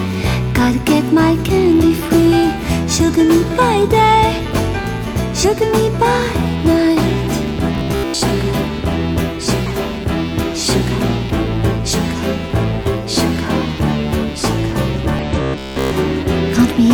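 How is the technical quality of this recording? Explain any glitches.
The recording has two recurring glitches: brief decoding blips and two stretches of metallic buzz.

Damaged data in a compressed stream appears at 2.65, 5.39, 9.66, 11.89 and 15.19 s, each lasting 30 to 56 ms. The decoder hits corrupted frames, loses sync and jumps to the next header, so each event is a brief glitch. Unlike the buzz, it is a single isolated blip.

Robotic sound from repeated short buffers occurs from 7.75 to 8.21 s and from 15.42 to 15.93 s. It is a rigid, metallic buzz at 66.8 Hz, which fits a roughly 15 ms chunk being replayed for most of each stretch. The likely cause is audio arriving too late to fill the output. It sounds sustained and pitched rather than clicky.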